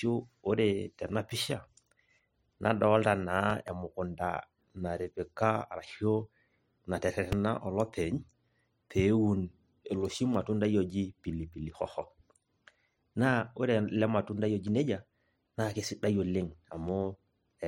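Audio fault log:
3.50 to 3.70 s, loud pop: two sharp pops in quick succession rise about 5 dB above the speech, which carries on underneath. The likely cause is a voltage pulse from a switch, plug or static. The waveform shows two narrow spikes, and the spectrogram shows two thin vertical broadband lines.
7.32 to 7.35 s, loud pop: a single hard pop peaks about 15 dB above the speech, probably a sudden voltage step from a connection or driver glitch. It appears as one tall spike and one bright vertical stripe across all frequencies.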